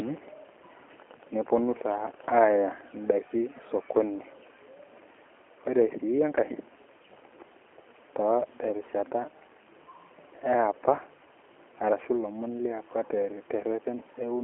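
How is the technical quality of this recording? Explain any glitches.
The recording is limited by heavy narrowband telephone coding. The G.729 codec (the G.729A variant) is present throughout. Content sits in a 300 Hz to 3.4 kHz line band, with nothing above 3.6 kHz, and the coding damage is plainly audible. The coder models speech as a vocal tract filter plus a pitch predictor and a few pulses per short frame, which fits an 8 kbit/s budget. The result is muffled, slightly rough, synthetic-sounding speech with no upper-frequency detail.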